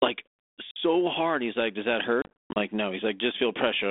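At 0.71 s the speech drops into a hard-edged silence of 50 ms, a burst of packet loss on an ADPCM call. At 2.22 to 2.57 s about 250 ms of audio disappears in scattered gaps over roughly 340 ms, the longest run 70 ms. The receiving decoder's predictor and step size lose track of the sender's, so each resumption comes back briefly distorted. The line's light, narrowband G.726 character, limited to about 250 Hz to 3.6 kHz, fits a 32 kbit/s link.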